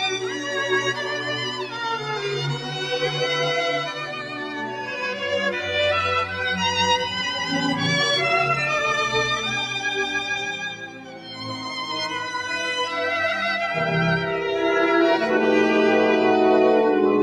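A noise suppressor built for speech stays active across the whole clip. Because it treats sustained tones, ambience and reverb as noise, the level swings by around 5 dB as it grabs and releases. Onsets pass mostly intact, but held parts and tails are pulled down, so the audio pumps and thins rather than sitting at a steady level.

In five places, sound gets cut by the noise suppressor more heavily than elsewhere. At 0.16 to 0.53 s it sinks by about 5 dB. From 0.88 to 1.79 s it drops by about 7 dB. At 2.55 to 2.88 s it loses about 6 dB. From 3.92 to 4.93 s it falls by about 7 dB, over roughly a second. The deepest cut comes at 10.73 to 11.55 s, at about 9 dB. In each span the steady or decaying material dips audibly or has its fade clipped short, while sharper attacks survive.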